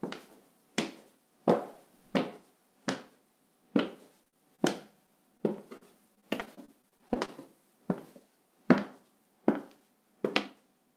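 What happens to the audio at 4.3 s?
Around 4.3 s the audio falls into repeated packet loss, giving a choppy, robotic sound from 4.23 to 4.60 s. Within that span four separate holes open up. Each is patched by stretching out the preceding sound, and in total this covers about 110 ms. About 40 ms is lost outright, and the longest gap is 41 ms. Concealment fills roughly a third of the span. Unlike a single dropout, the gaps keep recurring in quick succession, which produces the choppy, stuttering texture.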